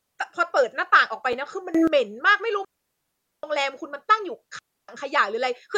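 At 1.33 s a gap between stream segments interrupts the speech. The time stamps of two consecutive pieces of the stream fail to meet, and the player fills the missing stretch of about 4.9 ms with silence. The hole has hard edges and is brief enough to register as a tiny tick or stutter rather than a pause. Its position fits a stream cut into 1-second segments, and none of the speech itself is lost.

From 1.75 s to 1.88 s the level leaps up by about 19 dB and then returns. The likely cause is a digital gain setting changing abruptly from one sample to the next without a ramp, so this is a sudden gain jump. Voice and background noise rise together by the same amount, which distinguishes it from someone simply speaking louder, and the level steps abruptly at each edge of the 0.13 s stretch.

Two digital wireless dropouts follow, from 2.65 s to 3.43 s (about 0.79 s) and from 4.59 s to 4.89 s (about 0.30 s). 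In each, the radio link loses too much data, and the receiver mutes itself with a very short fade rather than passing on corrupted audio. The result is a clean hole of near silence with no hiss or crackle on either side, and the speech carries on as if cut out.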